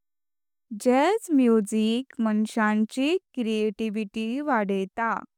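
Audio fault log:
Listening through this speech recording, nothing stood out as wrong.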